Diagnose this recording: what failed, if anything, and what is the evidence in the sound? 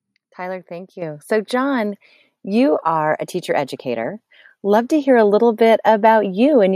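Call processing stepped the microphone volume up at 1.02 s: the speech and the room noise behind it both jump by about 8 dB at once, no ramp. That's the call software's gain control deciding the mic was too quiet and raising the device input level in a single step.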